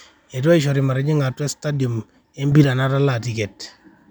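A digital gain setting was likely applied from one sample to the next with no ramp, causing a sudden gain jump from 2.52 to 2.64 s. The speech and its background noise leap up together by about 6 dB for that stretch.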